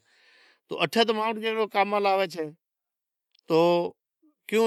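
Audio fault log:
No faults heard in this speech recording.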